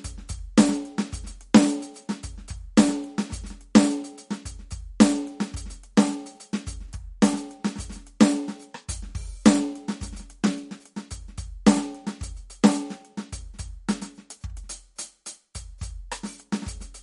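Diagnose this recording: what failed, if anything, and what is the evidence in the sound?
The music has nothing above 11.2 kHz for its whole length, and plainly audible watery, swirling artefacts with smeared attacks run throughout. The likely cause is MP3 compression at the codec stage, where a starved encoder, fitting roughly 48 kbps, cut the treble and dropped weak spectral lines frame by frame.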